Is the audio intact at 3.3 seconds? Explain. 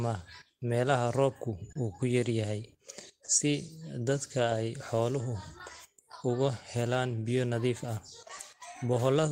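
No. From 3.25 to 3.30 s, just after "yar yahay", there is a short stall from a late packet. The jitter buffer ran empty, so the receiver stretched the last sound for about 30 ms and then resumed from the same point. The sound is held too long, but nothing is cut out. That is what separates it from packet loss, where part of the audio vanishes.

This moment also sits within clock drift between sender and receiver, which runs through the whole clip. The sender's clock runs about 2% slow, so the buffer keeps draining and the receiver repeats small pieces to cover the shortfall. The result is small timing hiccups at uneven intervals, recurring everywhere rather than once at a single point like this stall.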